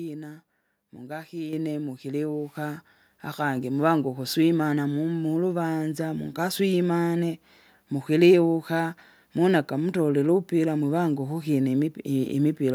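At 1.53 s the microphone volume stepped up: the input gain was raised in one jump of about 6 dB, so speech and background suddenly grow louder together.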